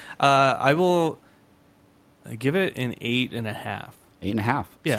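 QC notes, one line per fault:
Nothing to flag here, with just the room's own background sitting about 36 dB under the speech.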